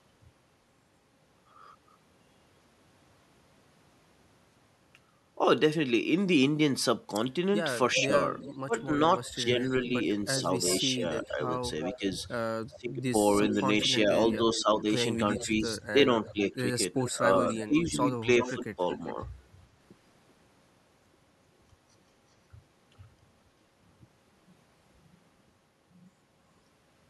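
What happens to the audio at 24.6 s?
At 24.6 s the speech plays through cleanly, with no dropout, click, distortion or other audible fault at that point.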